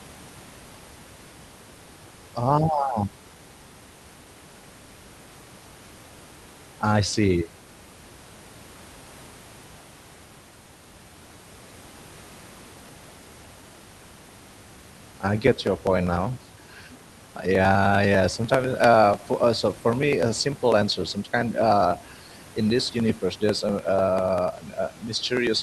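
From 15.37 s to the end, something on the host starts blocking the USB bus or audio driver at a fixed interval of 0.099 s, and each time a short slice of the speech is simply skipped rather than padded with silence. These periodic USB or driver dropouts come through as a steady ticking, about ten clicks a second, audible only while speech is present. The Opus call path has a bandwidth of roughly 12 kHz, and the room noise sits about 27 dB below the speech.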